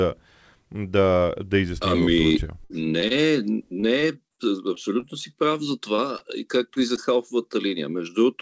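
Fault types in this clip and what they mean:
Repeated packet loss (robotic sound): Packets kept dropping in quick succession, each hole patched by stretching the last bit of sound. You get two choppy stretches, 2.28–3.12 s with five gaps (longest about 54 ms) and 3.80–5.04 s with six shorter ones, ending just before "си прав за".
Jitter buffer slow-down: The receiver was short on buffered audio, so it repeated small pieces of the signal to build a reserve. From 3.27 to 3.75 s about 40 ms gets added, so the sound runs at roughly 94% speed with the pitch unchanged and a drawn-out feel.
Short concealed packet loss: Isolated 20 ms chunks went missing and were filled in by continuing the preceding sound, then blended back in. They show as brief smears or wobbles at 5.96 s right after "си прав за", at 6.18 s, and at 6.74 s just before "и за".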